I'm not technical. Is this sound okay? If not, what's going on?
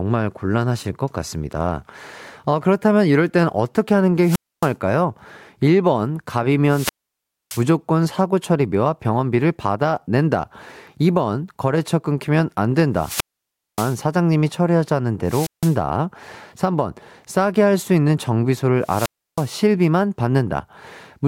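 No. The voice keeps dropping out in a wireless microphone squelch dropout: the radio signal fades, hiss rises, and the receiver mutes everything until the signal returns. It happens at 4.20–4.74 s, 6.67–7.65 s, 12.95–14.04 s, 15.25–15.78 s and 18.81–19.53 s. The silent gaps run from about 0.16 s to 0.62 s.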